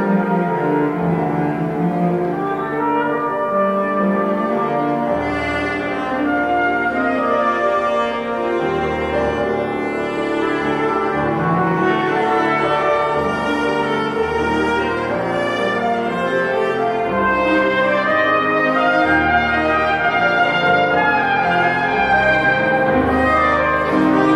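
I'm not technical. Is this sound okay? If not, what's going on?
Yes, nothing here sounds off, so there's no problem to worry about.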